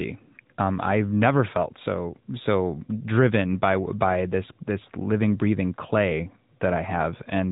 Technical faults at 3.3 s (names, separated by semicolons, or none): AMR narrowband mobile codec